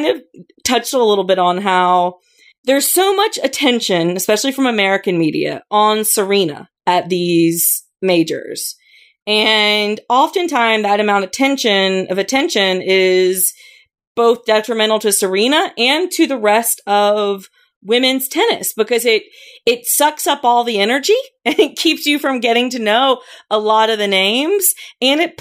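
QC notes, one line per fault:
Nothing to flag on this speech clip; no faults turned up anywhere along the way.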